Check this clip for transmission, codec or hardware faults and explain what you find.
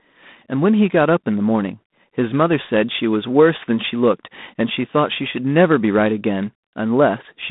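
The clip carries one codec fault, present from start to finish: G.726 ADPCM coding. Rather than storing each sample, the codec sends a few bits describing the difference from an adaptively predicted value. With too few bits that difference is coarse, and the error rides on the speech as a harsh, rasping hiss that rises and falls with its level. The depth of this plainly audible grit points to the 24 kbit/s mode. The band runs from about 150 Hz to 3.7 kHz, with nothing above 3.8 kHz.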